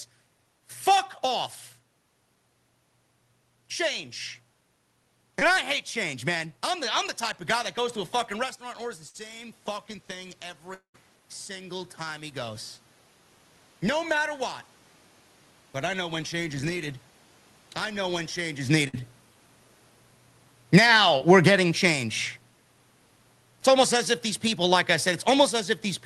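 At 5.39 to 5.55 s there is a short concealed packet loss. About 20 ms of audio never arrived, and the receiver filled it by extending the preceding sound, stretching that stretch slightly. It comes across as a brief smear.

From 8.35 s the automatic gain starts rising. After the talker moves away around 8.5 s, the input drops by about 12 dB, and the gain control slowly adds about 8 dB by 12.83 s. Voice and room noise swell together, so the waveform envelope and noise floor climb steadily.

Inside that rise, a burst of packet loss at 9.09 to 9.16 s removes 60 ms. The last sound is held and fades, and the sound resumes further on. A spectrogram shows frozen bands that fade before normal texture returns.

At 10.74 to 10.96 s, a long network dropout is the likely cause of a 200 ms hole. A fading fill gives way to about 100 ms of silence, visible as a flat, empty gap in the waveform.

A second burst of packet loss at 18.88 to 19.01 s drops 60 ms, adds a little delay, and shows the same held, fading band.

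A short concealed packet loss at 21.18 to 21.22 s leaves a tiny 20 ms smear.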